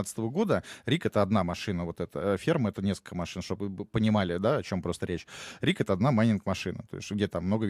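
A speech recording with nothing technically wrong with it.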